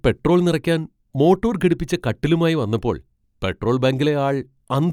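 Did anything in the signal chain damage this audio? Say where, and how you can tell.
No, nothing in the chain audibly damaged this speech, at any stage.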